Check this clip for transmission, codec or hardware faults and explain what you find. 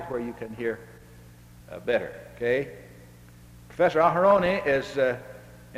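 One transmission fault is present: DAB burbling from 4.31 to 4.78 s. Bit errors at a rate of around 0.2 percent slipped past error correction into the MP2 data, corrupting samples and scale factors. Wrong samples put short blips of noise in single sub-bands, and wrong scale factors make sub-bands jump in level for up to a frame. This fits roughly twenty damaged frames, heard as burbling blips of noise.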